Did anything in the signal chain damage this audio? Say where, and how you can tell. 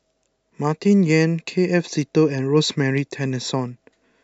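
No, nothing in the signal chain damaged this speech recording. None of the stages, from analogue wiring and conversion through to storage and playback, left an audible trace.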